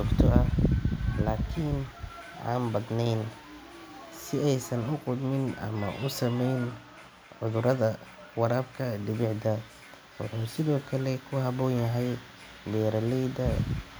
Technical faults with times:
none

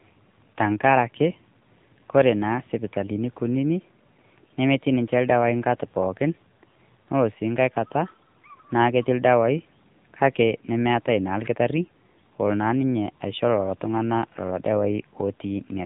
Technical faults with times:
0.00-15.85 AMR narrowband mobile codec

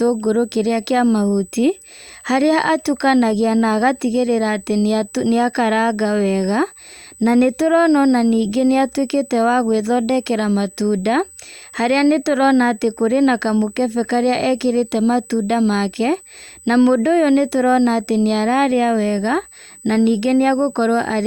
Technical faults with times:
0.00-21.27 USB whine

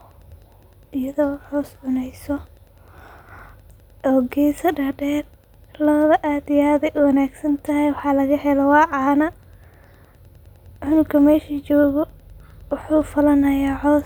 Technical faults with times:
0.00-14.05 Wi-Fi interference

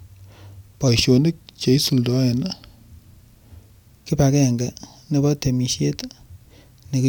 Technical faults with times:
0.88-3.88 wrong sample rate

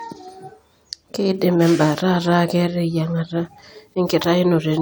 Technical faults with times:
none

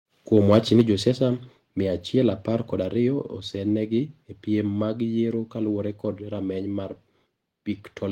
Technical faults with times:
0.52-0.81 microphone overload
0.81 microphone volume stepped down

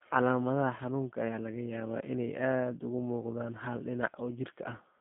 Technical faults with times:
0.00-5.00 G.729 codec

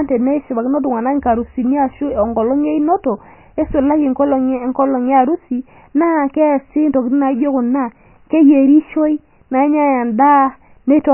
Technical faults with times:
0.00-11.13 MP3 compression

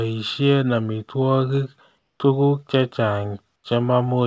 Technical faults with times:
1.98-2.20 comfort noise in place of the background
3.56-3.64 comfort noise in place of the background

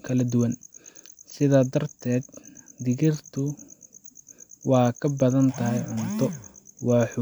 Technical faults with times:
none

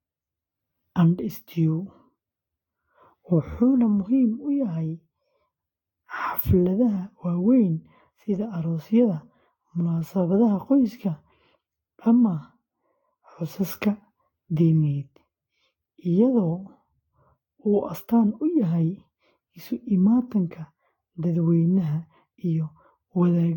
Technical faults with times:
0.00-23.56 generation loss

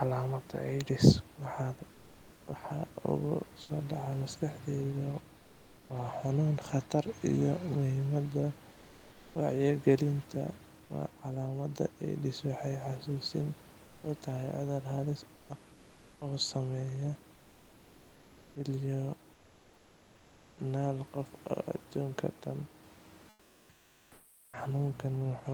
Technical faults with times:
3.61-3.69 sound dropped by the voice detector
5.37-5.89 comfort noise in place of the background
8.71-9.35 comfort noise in place of the background
15.35-15.49 comfort noise in place of the background
19.33-20.57 comfort noise in place of the background
23.29-24.53 comfort noise in place of the background

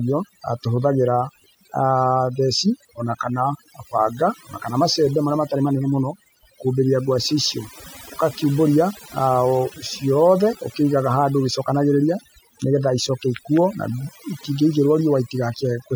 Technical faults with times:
0.00-15.96 overdone noise removal

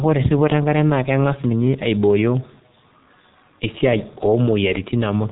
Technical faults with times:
0.00-5.32 G.723.1 codec

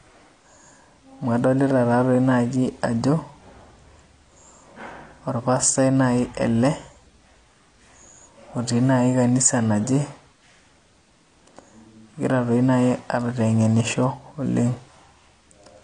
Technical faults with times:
0.00-15.84 AAC compression

